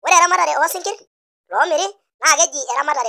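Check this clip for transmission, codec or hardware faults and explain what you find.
There's one fault, a wrong sample rate running the whole way through. The speech plays about 1.45 times too fast and roughly 6.45 semitones high, which fits 22 kHz audio being played at 32 kHz.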